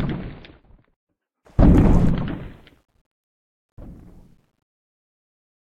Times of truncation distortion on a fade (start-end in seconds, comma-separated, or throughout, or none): 2.31-5.77